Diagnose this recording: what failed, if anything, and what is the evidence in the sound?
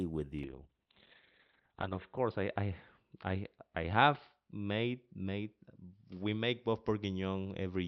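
From 0.45 s onward the speech turns rough and muffled, lacking anything above 4 kHz: a call bitrate drop, the codec falling from 32 to 6 kbps.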